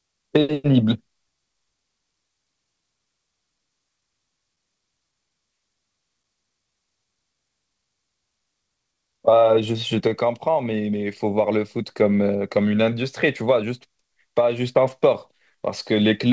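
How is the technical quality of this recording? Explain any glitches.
The recording has a steady timing problem in a speech clip carried over a G.722 call path, whose 64 kbps coding leaves nothing above 8 kHz.

Clock drift between sender and receiver runs through the whole clip. The sending device's audio clock runs about 2% slow relative to the receiver's, so samples arrive a little more slowly than they are played out. The jitter buffer keeps draining toward empty, and the receiver has to compensate constantly. The result is an unsteady pace with small stumbles spread unevenly across the clip rather than one obvious dropout.

Repeated timing corrections fill the stretch from 0.22 s to 16.09 s. To keep its buffer from running dry, the receiver repeatedly inserts short duplicated pieces of audio, all in the same direction, so playback runs at about 98% speed. Together these insertions add roughly 0.3 seconds. 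Each one is tiny, and they are heard, if at all, as faint hiccups or a slightly dragging, uneven rhythm at irregular intervals.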